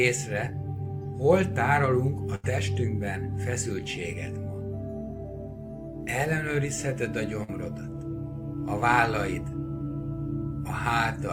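Bursts of packet loss at 2.35 s and 7.44 s lose about 80 ms and 40 ms, bridged by a fading held sound, not dropout silence.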